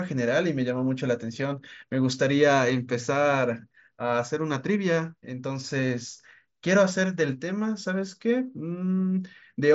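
The speech arrives intact through a wideband Bluetooth headset link using the mSBC codec, with the band ending near 7.7 kHz and only light codec graininess on louder passages, and no faults are present.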